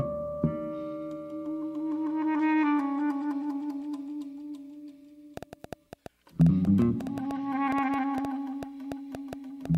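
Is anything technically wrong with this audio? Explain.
Yes. From 5.37 s to 9.76 s there's a train of clicks, around thirty short pulses at an uneven pace averaging about 5.7 per second, peaking roughly 10 dB above the music. It sounds like ragged ticking over the track, likely from electrical interference or a faulty connection or power supply.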